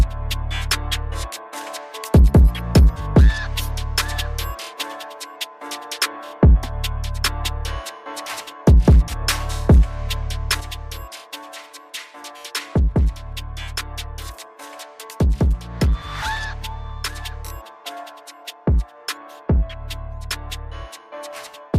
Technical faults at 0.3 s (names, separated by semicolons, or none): none